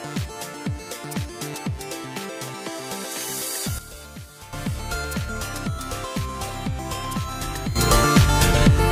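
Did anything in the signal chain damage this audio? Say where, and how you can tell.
Yes. There is a sudden gain jump at 3.79 s: the level drops by about 11 dB until 4.53 s, then snaps back. Another starts at 7.76 s, lifting the level by about 12 dB through to the end. The background noise moves by the same amount at the same instant as the sound, with no ramp. An automatic gain control or compressor would ease in and leave the noise floor behind. The likely cause is a digital gain or bit-shift setting applied sample-to-sample in the driver or processing stage.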